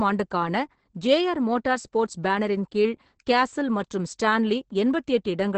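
Throughout this speech clip the voice sounds muffled and hoarse, with a slightly robotic edge, and nothing is heard above 8.7 kHz. This is heavy Opus voice compression. The SILK linear-prediction coder is working in wideband, modelling the voice as a filter driven by a coarsely quantised excitation signal and discarding the upper band. The roughness and cut-off point to a very low bitrate, around 10 kbps.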